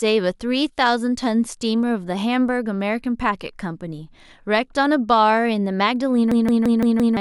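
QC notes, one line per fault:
6.32–7.17 s, system hang loop: the audio locks onto one 171 ms fragment and repeats it exactly five times, giving a hard, machine-gun stutter at about 5.9 Hz. The driver or host stalled while the output hardware kept replaying the same stretch of its ring buffer, and the loop length fits an 8192-sample buffer. Because the fresh audio was never delivered, roughly a second of the clip is lost and replaced by the repeats.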